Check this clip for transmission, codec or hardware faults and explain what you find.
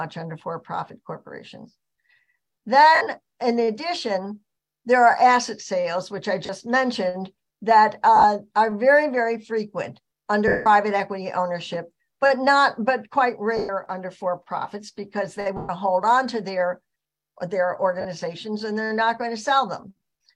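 Lost LE Audio frames occur seven times: 2.95 s (60 ms), 6.46 s (30 ms), 8.16 s (scattered over 80 ms, runs about 20 ms), 10.48 s (180 ms), 13.57 s and 15.57 s (120 ms each), and 18.01 s (40 ms). The decoder repeats the last spectrum with randomised signs, so tones smear into noise. The longer gaps fade toward silence.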